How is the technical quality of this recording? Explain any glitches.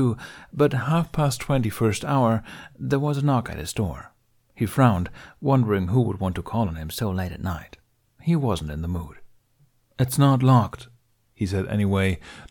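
The recording has three drift correction steps, at 0.82–1.99 s, 6.91–7.50 s (just after "to call on him") and 10.81–12.50 s. Clock-matching software likely changed playback rate abruptly to manage its buffer. The speech slows 6.36% and drops about 114 cents in the first and last, and speeds up 6.36% and rises about 107 cents in the middle. Each sounds like a sudden semitone detune.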